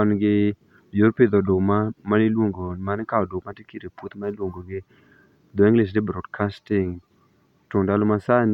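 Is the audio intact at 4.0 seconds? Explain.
Yes, at 4.0 s the speech plays through cleanly, with no dropout, click, glitch or other fault at that moment.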